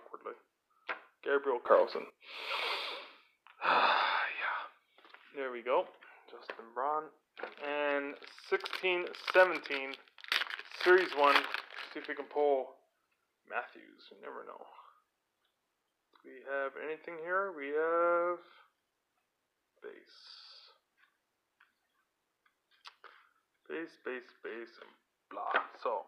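At 1.66 s the level steps up by about 12 dB in a single sample, a sudden gain jump, with the background noise rising along with the sound. It holds until 2.10 s, most likely a gain setting applied without a ramp.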